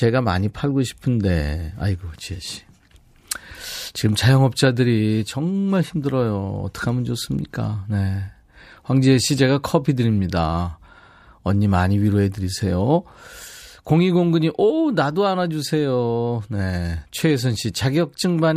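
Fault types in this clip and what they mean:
No faults detected on this speech clip; nothing to report.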